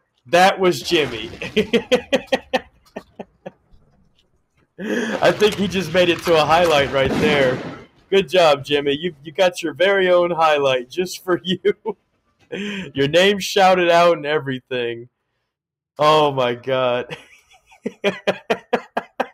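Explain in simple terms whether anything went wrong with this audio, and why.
Throughout, the sound pumps and thins: held parts and fading tails sink away while sharp onsets come through. A noise suppressor built for speech was applied to music or sounds, mistaking steady tones and reverb for background noise and turning them down by a widely varying amount.

At 2.42 to 4.79 s, 7.75 to 8.33 s, 9.11 to 9.39 s, 10.83 to 10.98 s, 11.19 to 11.47 s and 11.73 to 12.52 s, the sound ducks sharply or fades early. This is sound cut by the noise suppressor, which treated those passages as noise and pushed them down hardest.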